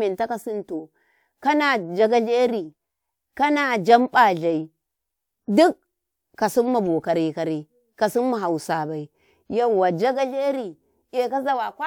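No technical faults can be heard anywhere in the recording.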